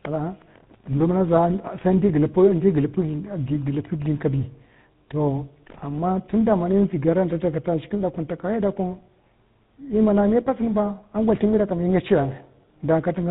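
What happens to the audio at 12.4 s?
At 12.4 s the speech is still under tandem speech coding: CVSD then GSM full rate recoding, via G.711, leaves it rough, warbly and muffled, with nothing above 3.8 kHz, throughout the clip.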